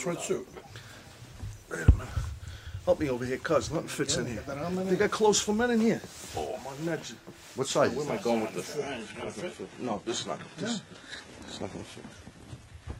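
At 8.77 s an adaptive stream drops to a lower bitrate and stays there. Everything above 11.8 kHz vanishes, which points to a switch from 96 kbit/s AAC to 16 kbit/s HE-AAC. Unlike packet loss, there is no gap, only an abrupt, lasting change in quality.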